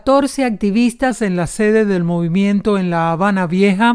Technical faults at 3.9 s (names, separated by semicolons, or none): wrong sample rate